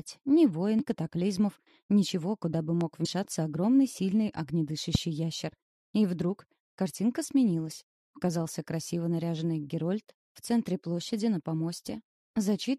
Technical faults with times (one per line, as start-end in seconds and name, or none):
0.79-0.81 damaged data in a compressed stream
2.81-2.83 loud pop
3.04 damaged data in a compressed stream
4.95-4.97 loud pop